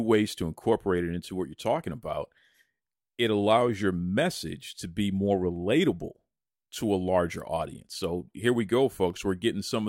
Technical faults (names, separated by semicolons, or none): dropped samples